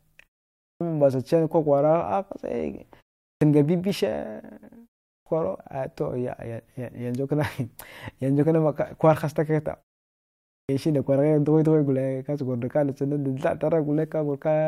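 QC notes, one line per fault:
0.75 s, 3.36 s, 5.21 s, 10.63 s: clipped start after a pause. Each time speech resumes, it jumps in abruptly out of silence with its opening sound missing, roughly 53 to 59 ms swallowed. All four follow pauses of 0.41 to 0.88 s. The output device drops into a low-power or unlocked state during the gap and needs that fraction of a second to wake before audio passes again, so the first sound is lost.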